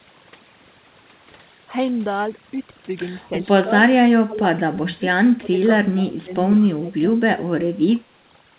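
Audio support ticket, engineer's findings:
Overdone noise removal, throughout: background drops and breaks up into twinkling specks; quiet parts of speech lost as bands near the noise estimate are pulled down with the noise.

Speech suppressed in double talk at 4.26–4.43, 4.71–5.02, 5.38–5.58, 5.90–6.31, 6.58–7.03, 7.35–7.91 and 8.12–8.18 s. Speech dips by about 15 to 20 dB, about 5 dB at the last. Likely echo canceller attenuating the near talker during overlap with far-end audio.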